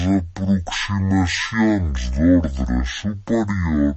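From start to finish the speech suffers a wrong sample rate: it runs at half speed and a full octave (12 semitones) low, which fits 48 kHz audio played at 24 kHz. A spectrogram shows harmonics squeezed to half their frequencies and stretched in time.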